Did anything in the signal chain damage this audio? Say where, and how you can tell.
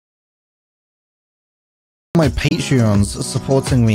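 Yes. An audio dropout to silence runs from the very start of the clip to 2.15 s. The first stretch is pure silence with no room tone or noise floor, and the sound then cuts in abruptly mid-flow rather than starting naturally. That points to the capture stage, with the input most likely lost through a disconnected device, a failed link or a mute while the recorder kept writing empty samples. Whatever came before 2.15 s is gone.

A Bluetooth dropout follows from 2.48 to 2.53 s: a short hole with hard or very briefly faded edges. The audio resumes as if it had kept playing underneath, with no pause in the flow. This belongs to the playback link. Packets to the headphones arrived too late and were discarded, so the output went silent until good data arrived. The gap's size fits a single lost frame of about 23 ms of audio.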